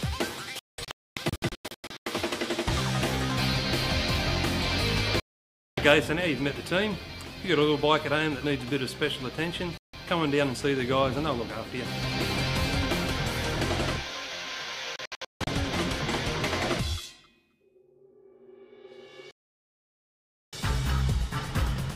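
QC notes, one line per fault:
0.59–2.07 s: digital broadcast dropout. The sound cuts in scattered holes totalling 0.96 s, the longest 0.26 s. The receiver mutes whenever frames fail and resumes on good ones, and the whole-frame steps fit roughly 32 ms frames.
5.20–5.78 s: digital broadcast dropout. It is a single 0.58 s mute.
9.78–9.94 s: digital broadcast dropout. It is a brief 0.16 s mute.
14.96–15.48 s: digital broadcast dropout. Broken holes total 0.35 s, the longest 0.16 s.
19.31–20.53 s: digital broadcast dropout. It is a continuous 1.22 s mute, and that audio is lost.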